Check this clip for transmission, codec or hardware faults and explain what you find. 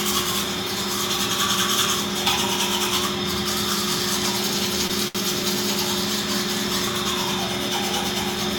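Two short stalls from a late packet occur, at 4.87–4.93 s and 5.08–5.18 s. Each time a packet arrived late and the jitter buffer ran dry, so the receiver held the last sound for about 22 ms and then 70 ms before resuming where it stopped. Nothing is lost, but the sound briefly sustains with a slight buzz or dip.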